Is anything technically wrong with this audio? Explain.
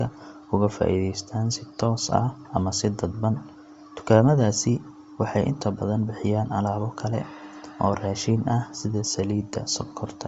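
Yes. Throughout the clip, the speech has likely been carried over Bluetooth LC3 compression at a low bitrate. The coarse quality points to something around 32 kbps with 10 ms transform frames. With so few bits per frame, the codec discards much of the upper spectrum and fills those bands with synthetic noise instead of the real detail. The voice therefore takes on a plainly audible breathy, grainy edge, with the high end sounding hissy.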